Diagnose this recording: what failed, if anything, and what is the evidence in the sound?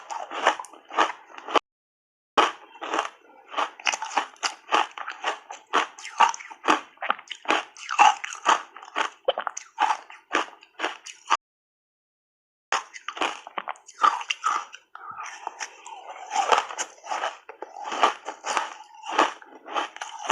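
Playback stage, two playback stalls. The sound cuts out mid-flow at 1.58 s and stays silent for about 0.8 s until 2.38 s, then again from 11.35 s to 12.73 s, roughly 1.37 s of nothing, before carrying on. The gaps are clean dead air rather than glitches or noise. The likely cause is the player starving for data or its output thread getting blocked, so the device simply had nothing to play until it caught up.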